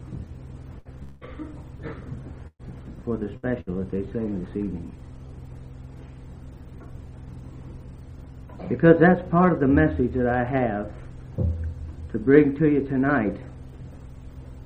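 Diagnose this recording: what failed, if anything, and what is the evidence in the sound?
The network stage dropped audio in four bursts of packet loss, at 0.79 to 0.88 s, 2.47 to 2.62 s, 3.37 to 3.46 s and 3.61 to 3.70 s. Each time the receiver had nothing to play and extended the last sound, fading it down, for about 60 ms in three cases. At 2.47 s the fill runs about 120 ms and ends in roughly 60 ms of silence. The sound then resumes with the lost section skipped.

From 1.03 to 1.24 s there is a longer gap, most likely a long network dropout. The receiver covers about 180 ms by stretching the preceding sound into a fading buzz or hiss, with no stretch of true silence, then jumps ahead. The span that never arrived is gone, so the sound on either side of the fill does not connect.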